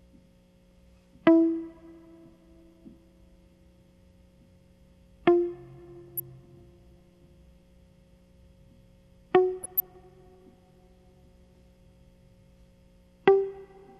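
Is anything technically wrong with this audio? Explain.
Yes. There is DAB burbling in the music at 6.08 to 6.2 s and again, longer, at 9.63 to 9.96 s. Weak reception lets bit errors, at a rate of a few tenths of a percent, slip past error correction into the MP2 stream, so corrupted samples put short noise blips in single sub-bands and corrupted scale factors make individual sub-bands jump in level for up to a frame. It sounds like a bubbling, watery disturbance; a heavy patch turns into chirps and squelches, a light one into a few watery blips. On a spectrogram, isolated rectangular blocks flash on and off in separate frequency bands.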